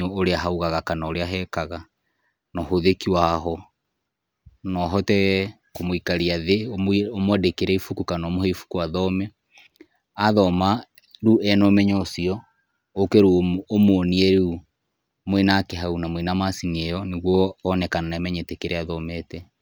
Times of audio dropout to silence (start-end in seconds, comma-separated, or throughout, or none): none